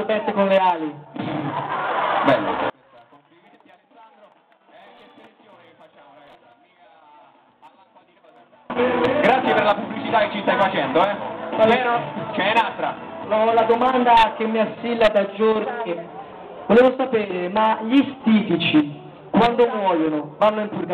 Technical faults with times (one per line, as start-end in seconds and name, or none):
2.70-8.70 one channel inverted